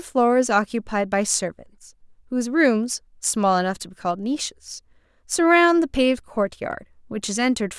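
No technical faults are audible.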